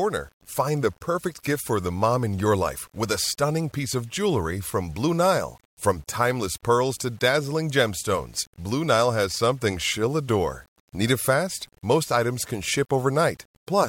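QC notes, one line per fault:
Throughout: low bit depth without dither. Grainy distortion follows the speech, rough in quiet passages and decays, with the faintest levels dropping out or sputtering. Error sits around 35 dB below the signal, which fits an 8-bit signal, likely rounded with no dither applied.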